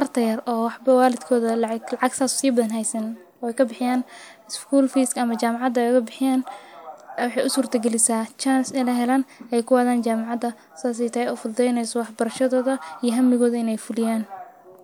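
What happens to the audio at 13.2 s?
Nothing goes wrong at 13.2 s; the speech carries on intact through that moment with no dropout, click or distortion.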